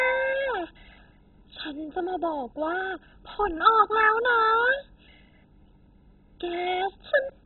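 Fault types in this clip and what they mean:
MP2 compression: the speech sounds dull and gurgly, with nothing above 4.1 kHz and a coarse, granular grit throughout, likely from MPEG Layer II coding starved of bits, fitting around 16 kbps, so upper sub-bands get dropped and the rest roughly quantised.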